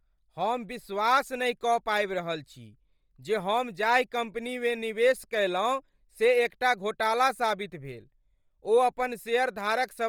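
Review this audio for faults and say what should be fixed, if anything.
Right through the speech there's a breathy, grainy sheen on the upper frequencies, with detail smeared into shimmery noise. That's heavy damage, likely from Bluetooth LC3 compression, where the encoder discards much of the treble and fills it with noise, consistent with a low rate near 32 kbps in 10 ms frames. To prevent it, capture over a wired link or raise the LC3 bitrate.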